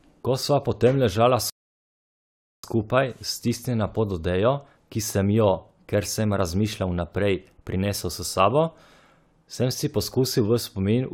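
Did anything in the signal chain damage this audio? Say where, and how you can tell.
Yes: a rebuffering stall at playback, from 1.50 to 2.64 s. The speech halts into silence and resumes exactly where it stopped, adding 1.14 s. The player starved of downloaded audio. The waveform shows a flat gap, the spectrogram a blank band, with nothing missing either side.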